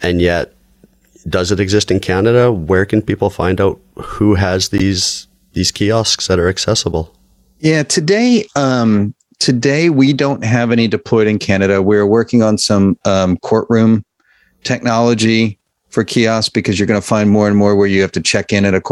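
At 3.30 s, between "can people" and "find out who has", a corrupt frame decoded produces a faint blip, peaking only around -30 dBFS. A louder one follows at 4.78 to 4.81 s after "find out who has", the strongest of the three, and a moderate one at 6.92 s after "these kiosks that are". In each case damaged bits in a couple of compressed frames were decoded anyway, so misread codes placed energy at the wrong frequencies. On a spectrogram each appears as a short, misplaced smear or vertical streak. On the waveform it is a brief spike, tallest at 4.78 s.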